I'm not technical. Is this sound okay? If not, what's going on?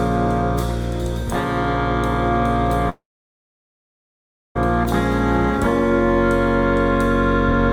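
No. A long network dropout runs from 2.89 to 4.57 seconds. The last sound trails off as a brief fading buzz or hiss, then about 1.5 seconds of silence follow, likely because the audio stopped arriving. It resumes at 4.57 seconds, with roughly 1.7 seconds permanently lost.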